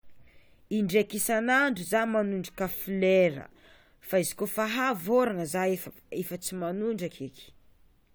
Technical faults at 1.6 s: none

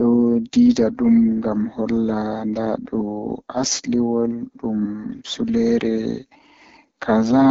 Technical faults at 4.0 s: AMR wideband (HD Voice) codec

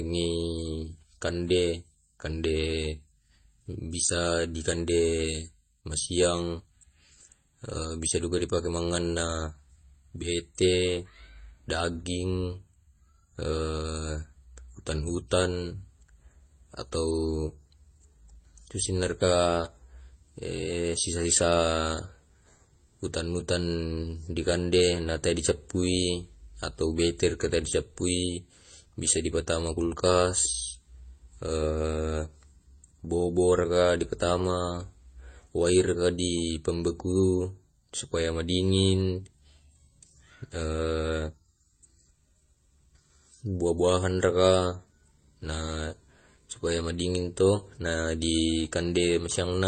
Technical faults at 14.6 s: transcoding between lossy codecs

